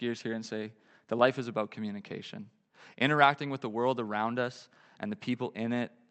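No technical faults can be heard in the speech, which reaches the listener over a WebRTC call path whose Opus coding limits the band to 8 kHz.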